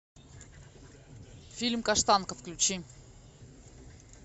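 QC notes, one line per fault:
No faults found, so there is no fault line to give.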